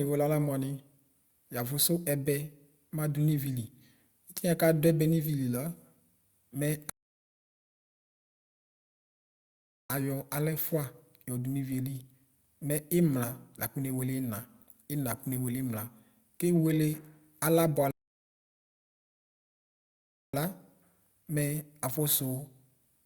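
At 6.90 s the speech drops into silence for 3.0 s, then picks up exactly where it left off. That's a rebuffering stall: the player ran dry of downloaded audio and waited. A second one hits at 17.91 s, adding about 2.4 s before resuming.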